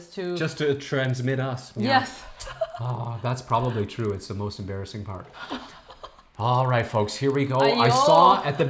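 The resampler restarted on every 50 ms block, so each block edge carries a small error, heard throughout as a ticking buzz at 20 Hz.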